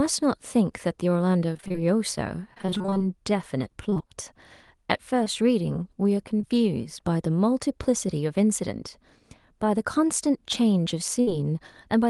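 Speech over a call link, with the top end rolled off above roughly 12 kHz, which fits Opus at a modest call bitrate. From 1.53 to 4.09 s there's repeated packet loss giving a robotic sound: 21 small holes, none longer than about 23 ms, each patched by stretching the preceding sound, so roughly a sixth of that stretch is filled-in audio and it comes out choppy. Then there's short concealed packet loss at 5.24 to 5.28 s, 6.38 to 6.42 s and 6.42 to 6.59 s, each dropping about 20 ms that gets papered over with a continuation of the last sound, so you hear a quick smear or wobble. The last of these also pushes playback back by a small amount, around 15 ms. Finally, a burst of packet loss at 11.21 to 11.29 s knocks out about 60 ms in one go. The receiver holds the last sound and fades it out, leaving a brief buzz or hiss before the audio picks up further along, with that piece gone.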